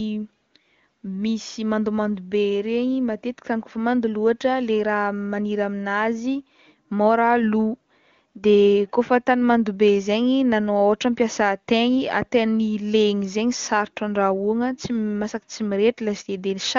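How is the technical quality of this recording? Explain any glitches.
Nothing in the recording stood out as a technical problem on listening.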